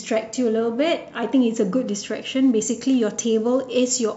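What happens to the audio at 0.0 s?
Nothing goes wrong at 0.0 s; the audio is intact, with no dropout, click, distortion or other fault at that point.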